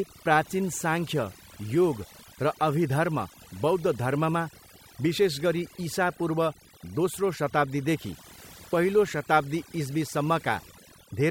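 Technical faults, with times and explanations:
Throughout: overdone noise removal. Noise reduction was applied far too aggressively to the speech. Frequency bands near the estimated noise floor are pulled down or gated off, and softer parts of the voice go with them. The background drops and breaks up into twinkling specks.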